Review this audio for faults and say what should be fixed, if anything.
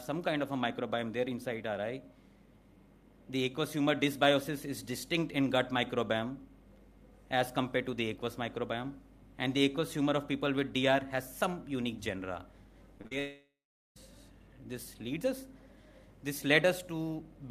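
Short concealed packet loss hits at 12.98 s, 13.02–13.05 s and 13.07–13.12 s: tiny gaps patched by extending the last sound, so you hear quick smears and wobbles.

Then a long network dropout, likely from the link stalling, runs 13.19–13.97 s. Concealment buzzes or hisses briefly, fades, and about 0.4 s of silence follows.

To prevent this, use a steadier connection with a larger jitter buffer or some redundancy or forward error correction on the stream.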